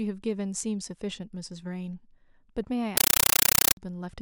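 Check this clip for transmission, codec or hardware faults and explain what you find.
One fault, at 2.97 to 3.77 s: a compressed stream played as audio. A Dolby Digital (AC-3) bitstream reached the output undecoded and was read as ordinary samples, which fits a 384 kbps stream. Each frame becomes an 8 ms noise burst followed by silence, repeating 31.25 times a second, so loud chattering static replaces the speech.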